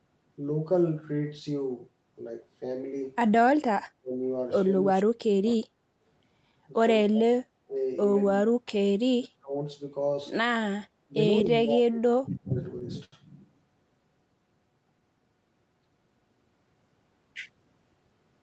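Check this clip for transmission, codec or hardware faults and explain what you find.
Two kinds of fault are audible: repeated speech suppression in double talk, and one short stall from a late packet.

Speech suppression in double talk occurs eight times: 3.99–4.17 s, 4.81–5.64 s, 7.06–7.46 s, 7.66–7.75 s, 8.41–8.71 s, 9.15–9.54 s, 11.07–11.15 s and 11.43–12.56 s. The speech dips sharply, by up to about 40 dB, and sometimes vanishes in pieces. The longest hole lasts about a second. The likely cause is an echo canceller that cannot tell the local talker from loudspeaker echo while both sides talk. So it turns everything down.

The short stall from a late packet sits at 13.05–13.15 s. A packet arrived late and the jitter buffer ran dry. The receiver stretched the last sound for 76 ms, then carried on from the same point. Nothing is lost. The delay simply grows by 76 ms. What you hear is one sound held slightly too long, with a faint buzz or dip.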